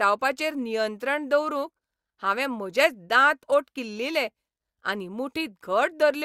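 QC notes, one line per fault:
No fault heard in this clip.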